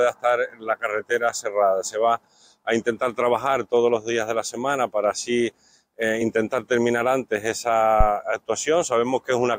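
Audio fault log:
8.00–8.08 s, phantom power thump: a supply switched on or off at a live input steps through the coupling capacitors, giving a deep thump at about -5 dBFS that decays in 17 ms; it appears as a lopsided waveform spike and a low-frequency smear on the spectrogram.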